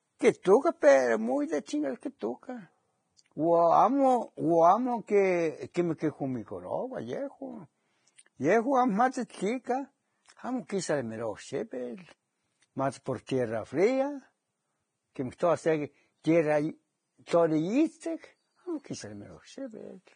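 Across the whole speech clip, the treble stops abruptly at about 9.7 kHz. What remains below that sits under a grainy hiss that tracks the signal level, and the tones sound roughened. The likely cause is heavy Vorbis compression, at a rate that fits roughly 22 kbps. At that setting the encoder lowers its cut-off and quantises the residue above its spectral floor so coarsely that fine high-frequency detail turns into noise of similar energy, and sharp onsets lose definition.

At 5.74 s and again at 13.27 s, a sudden attack is preceded by a brief smear of hiss lasting about 17 ms, and the onset itself sounds softened. This is pre-echo. The transform codec spreads its quantisation noise evenly across each block, so when a loud transient lands late in a block, noise scaled for the loud part leaks into the quiet stretch just before it.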